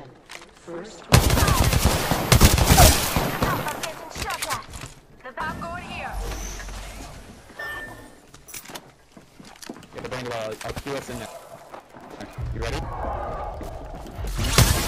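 From 10.46 s to the end at 14.88 s there is Wi-Fi interference: a faint, regular ticking at just under ten clicks per second, about 35 dB below the rest of the sound. A nearby Wi-Fi radio's beacon transmissions, repeating every 102.4 ms, are being picked up and rectified by the audio circuit, so each burst of RF energy turns into a short audible pulse superimposed on the audio.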